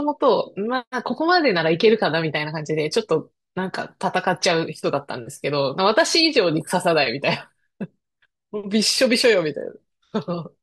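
Nothing technically wrong turns up anywhere in this short bit of speech, so there's no fault to point to here.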